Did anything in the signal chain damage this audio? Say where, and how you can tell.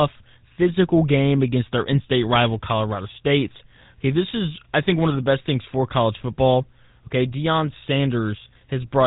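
Yes, at the codec stage, for the whole clip: this is GSM full-rate coding, and the damage is plainly audible. The speech has a constant buzzy, gravelly roughness, and nothing reaches above 3.8 kHz. The codec models the vocal tract and drives it with a regular pulse train that keeps only every third excitation sample, which fits a 13 kbps full-rate stream. A plain telephone band-limit would sound dull but clean, without this grainy buzz.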